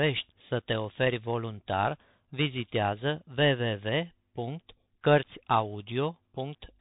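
Throughout the clip, the speech has passed through the Bluetooth CVSD headset codec. It codes each sample as a single up-or-down step, which fits a 64 kbps link, so nothing above 3.8 kHz survives. The speech sounds plainly narrowband, with scratchy sibilants and a granular hiss underneath.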